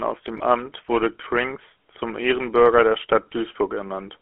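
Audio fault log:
Throughout: GSM full-rate codec, buzzy gravelly roughness from pulse-driven vocal-tract modelling, consistent with 13 kbps; spectrogram shows energy confined to 250 Hz–3.4 kHz, sharp band edges.
0.38–0.41 s: lost GSM frames, a brief metallic ring where the last good frame was repeated, fitting one 20 ms frame; waveform shows a short smear.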